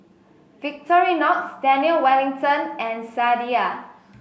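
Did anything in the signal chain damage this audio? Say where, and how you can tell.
No, nothing damaged this audio.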